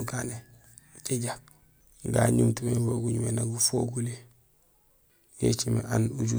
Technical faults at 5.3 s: none

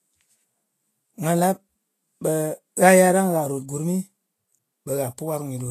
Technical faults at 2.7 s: Vorbis compression

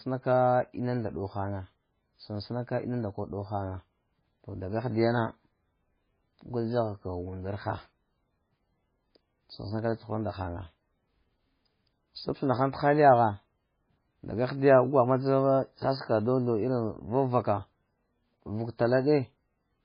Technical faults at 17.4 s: MP3 compression

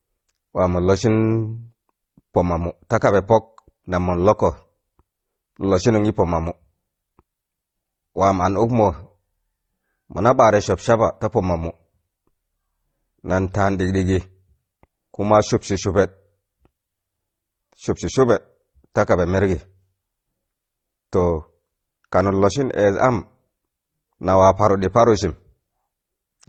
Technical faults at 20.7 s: transcoding between lossy codecs

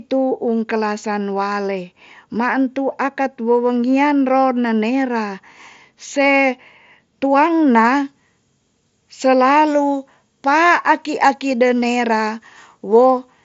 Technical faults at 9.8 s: pre-emphasis left on

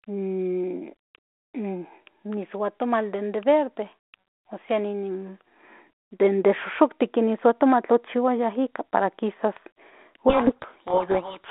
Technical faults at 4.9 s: none

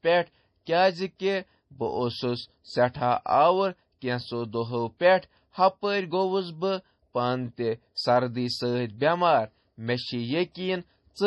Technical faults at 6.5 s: MP3 compression

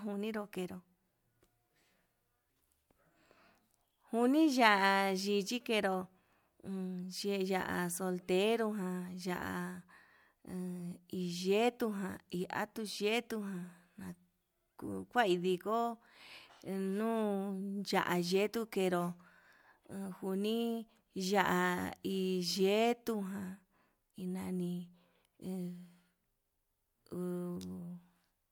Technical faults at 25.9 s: none

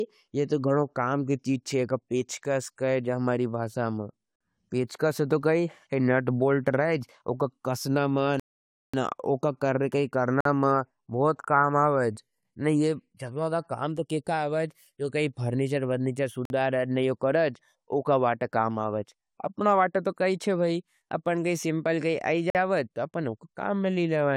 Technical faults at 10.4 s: gap between chunks

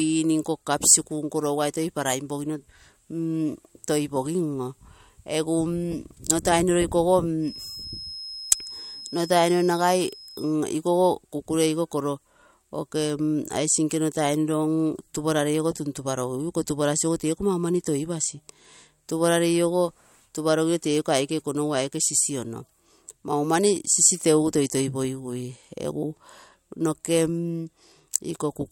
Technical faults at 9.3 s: feedback whistle

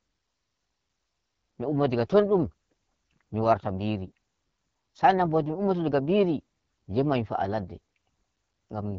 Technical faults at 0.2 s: AMR wideband (HD Voice) codec

